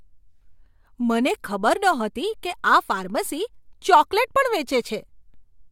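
No technical faults can be heard anywhere in the speech.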